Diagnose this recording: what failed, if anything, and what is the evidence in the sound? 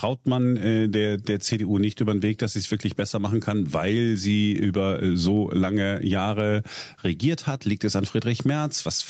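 Throughout the speech, the level ducks abruptly as each loud syllable arrives, a breathing movement of roughly 15 dB. Loud and quiet passages sit unnaturally close in level, and the speech sounds squashed. This is gain pumping, likely caused by microphone gain set far too high, with a fast limiter or compressor in the capture chain pulling the level down on every peak and releasing it in the gaps.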